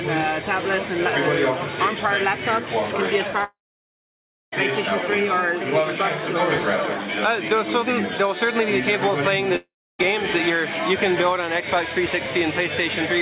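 Long network dropout, 3.44 to 4.55 s: the sound breaks into a brief fading buzz, then about 0.96 s of silence before resuming, with roughly 1.1 s of material simply gone. The same thing happens again from 9.56 to 10.08 s, a shorter gap of about 0.44 s lost with about 0.31 s of silence. The likely cause is packets ceasing to arrive, so the receiver stretches the last sound briefly before falling silent. Throughout, the G.711 mu-law call path caps the audio at 4 kHz.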